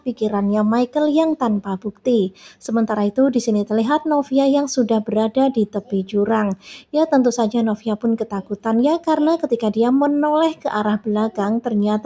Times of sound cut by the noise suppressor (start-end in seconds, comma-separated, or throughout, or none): 0.00-0.15, 1.85-2.62, 5.67-5.92, 6.56-6.94, 8.43-8.65